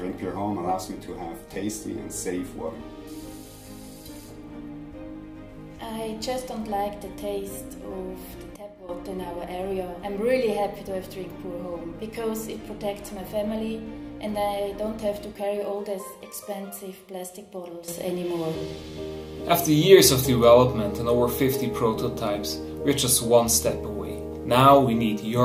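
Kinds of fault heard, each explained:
Sudden gain jump: At 8.56 s the level drops abruptly by about 12 dB and snaps back at 8.89 s, and at 17.88 s it rises by about 12 dB and stays raised until the end. Sound and background noise move together with no fade in between, so the whole signal steps instantly. This is likely a digital gain setting or bit shift applied from one sample to the next without any ramp.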